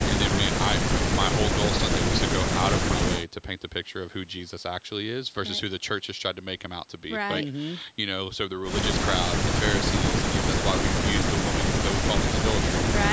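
No technical faults are audible.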